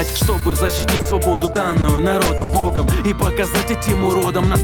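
Repeated packet loss (robotic sound) runs from 0.39 to 2.79 s: frequent dropouts, up to 80 ms, are patched by repeating sound, showing as smeared, stuttering blocks in the spectrogram.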